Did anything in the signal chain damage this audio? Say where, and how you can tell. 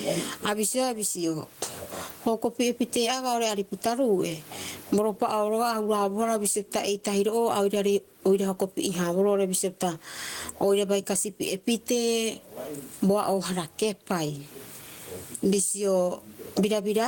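Yes: gain pumping all the way through. The gain swings by around 20 dB under speech, likely mic gain set too high with a fast limiter clamping it.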